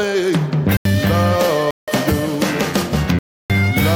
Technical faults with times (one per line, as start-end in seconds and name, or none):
0.77-0.85 block of digital silence
1.71-1.88 block of digital silence
3.19-3.50 block of digital silence